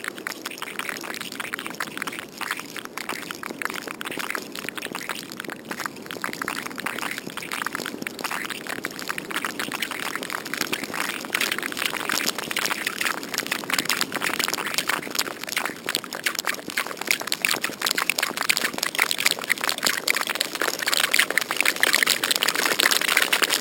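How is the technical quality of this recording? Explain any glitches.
The recording has one fault, present throughout. Imaging from sample-and-hold upsampling, which points to audio raised from 12 kHz to 48 kHz by repeating samples unfiltered, adds a metallic fizz at 6 to 12 kHz, about 8 dB below the sound. Unlike hiss, it rises and falls with the sound.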